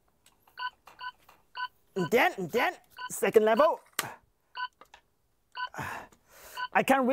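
From 0.99 to 3.09 s a doubled audio track appears: a full-band copy trails by about 400 ms at about 5 dB lower, likely from a slower second capture path. Unlike an echo, it has no decay or room colour and switches on and off abruptly.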